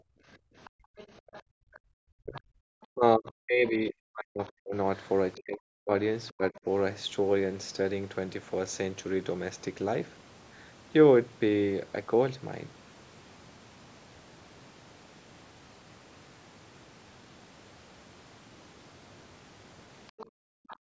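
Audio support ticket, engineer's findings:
Background gated by the echo canceller, 0.0–1.81 s and 20.26–20.9 s: room tone pumps down about 40 dB while far end plays; waveform floor collapses to near-flat, spectrogram noise band blanks out.

Other side's voice leaking through, 0.65–1.78, 2.34–2.83, 4.96–5.41, 20.07–20.77 s: faint second talker, roughly 20–25 dB under local speech; likely residual echo.

Speech suppressed in double talk, 2.09–4.75 s and 5.34–6.66 s: local talker dips up to about 40 dB in chunks, likely AEC suppressing during overlap; waveform notches, spectrogram gaps below the normal 8 kHz ceiling.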